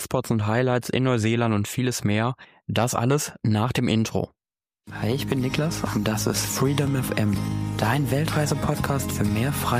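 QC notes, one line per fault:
5.87–8.87 s, periodic USB or driver dropouts: about four very short gaps, each roughly half a millisecond of silence, spaced 1.0 s apart. A recurring stall in the USB transfer or audio driver drops samples on a fixed schedule, heard as evenly timed ticks over the sound.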